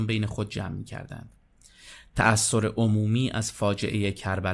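Nothing goes wrong in this stretch of speech; there's no technical fault to point to anywhere along the way.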